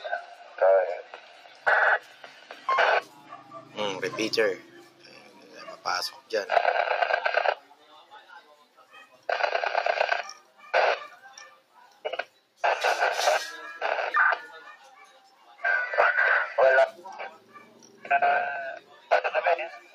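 A speech-style noise suppressor has been left on this sound. It treats steady parts as noise, so the level pumps by roughly 10 dB and tails thin out. Sound cut by the noise suppressor is clearest from 0 to 6.3 s, 7.58 to 9.28 s, 10.38 to 12.61 s, 14.76 to 15.61 s and 17.31 s to the end. Held and fading parts sink by up to about 9 dB, about 7 dB in the last stretch.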